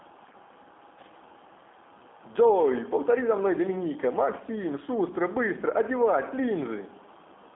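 From start to finish the speech carries the sound of the G.729 codec, which fits an 8 kbit/s G.729A voice link. Each 10 ms frame is rebuilt from a vocal tract filter, a pitch predictor and a few excitation pulses rather than the original waveform, so the speech has a plainly audible rough, synthetic edge. The line band runs from about 200 Hz to 3.5 kHz, and nothing above 3.6 kHz survives, leaving the sound narrow and muffled.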